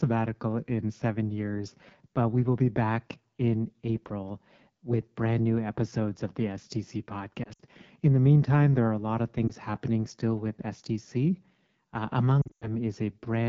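Speech sent through the AMR wideband (HD Voice) codec, whose raspy, roughened texture throughout points to one of its lowest rates, around 8.85 kbit/s. Lost AMR speech frames, where radio errors failed the checksum and the decoder filled in by repeating earlier settings at falling gain, cause brief fading dropouts at 7.43 to 7.61 s, at 9.47 to 9.51 s between "are a lot of" and "happening still with", and at 12.41 to 12.69 s, where up to 100 ms runs go briefly silent.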